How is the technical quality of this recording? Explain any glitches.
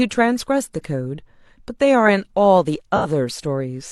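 One glitch stands out in this speech recording: a brief AAC frame loss with concealment from 2.96 to 3.06 s. About 85 ms of coded audio went missing, which fits two lost frames. The decoder patched the gap by reusing the last good spectrum with randomised phase, so instead of a dropout you hear a short smeared, noisy, phasey blur where the speech loses its crispness. On a spectrogram the harmonic lines go fuzzy and lose their fine detail across that stretch, while the waveform shows no gap to zero.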